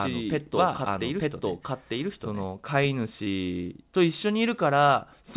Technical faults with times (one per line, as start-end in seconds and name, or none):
0.00-2.44 doubled audio track
3.24-3.28 short concealed packet loss